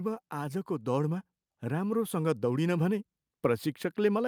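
A speech recording with automatic gain rising from 0.3 s through to the end of the clip. The level climbs steadily rather than stepping, and the background noise floor swells right along with the voice, which is the signature of a gain stage acting on the whole signal, not a change in how loudly anyone is talking. The automatic gain control judged the input too quiet and kept raising its gain over roughly four seconds.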